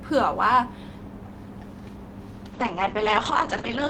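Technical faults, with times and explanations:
2.55–3.90 s, call bitrate drop: from 2.55 s to the end of the clip the speech turns coarse and muffled, with the top end cut off at 8 kHz where it previously reached 20 kHz. The change fits the encoder being told to fall from around 32 kbps to about 8 kbps after the call's bandwidth estimate dropped. With so few bits, Opus quantises the spectrum crudely and discards the high band, producing the rough, dull texture that lasts about 1.35 s without recovering.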